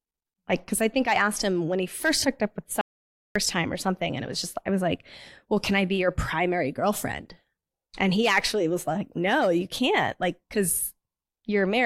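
A speech recording with an audio dropout to silence from 2.81 to 3.36 s: about 0.54 s of sound vanishes into silence, with no room tone. The waveform drops to a flat line there and the spectrogram shows a blank vertical band, likely from a lost input or mute.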